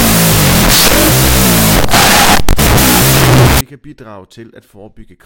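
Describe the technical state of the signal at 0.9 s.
Loud hissing noise swamps the speech, which sits buried beneath it at half speed and an octave low. This is a wrong sample width fault, running from 0 to 3.61 s, just before "kan bidrage til at": 16-bit samples are read as unsigned 8-bit bytes.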